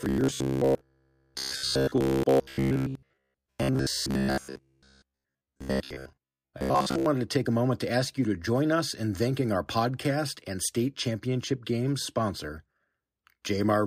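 Robotic sound from repeated short buffers, 0.02–7.06 s: a 15 ms stretch replayed repeatedly likely imposes a metallic 66.7 Hz buzz on the speech.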